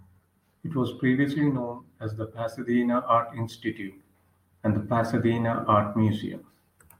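No technical faults occur at any point in the speech.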